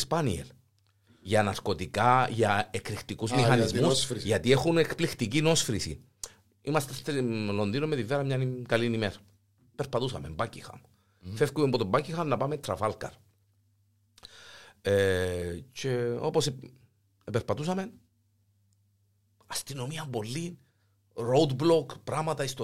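No technical faults can be heard anywhere in this speech recording. Nothing breaks up, drops out or shifts as it runs, and no stretch stands out from the rest.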